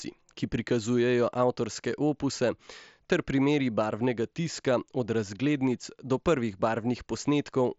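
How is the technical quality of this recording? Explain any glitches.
There are no glitches in this speech recording. It comes through a Bluetooth mSBC headset link, so the sound is band-limited to about 8 kHz with a light coding texture.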